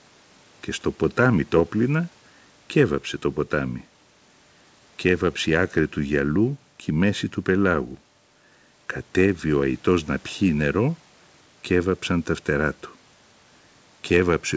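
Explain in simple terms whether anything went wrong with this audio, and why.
Nothing went wrong with this audio: it simply passed through an ordinary call connection, which as usual leaves out sound above about 8 kHz.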